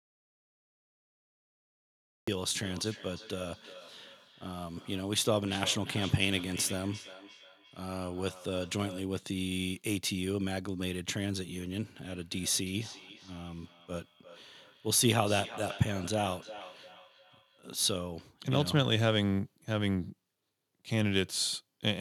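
The speech clip opens in total silence. The audio dropout to silence is already under way at the start and lasts until 2.28 s. There is no room tone in the gap. The input was likely lost, perhaps through a dropped link or a stray mute, while the recorder kept writing. Whatever came before 2.28 s is missing. The speech then starts abruptly.

From 2.62 s to 9.16 s, feedback echo between two devices appears. Each phrase returns roughly 400 ms later, thinner and ringing. The loudest repeats sit about 16 dB below the speech. A second device in the room is playing the call back into a microphone, and neither echo canceller removes the other's sound. The same fault returns from 12.02 s to 17.65 s, with the same spacing and peaks about 15 dB down.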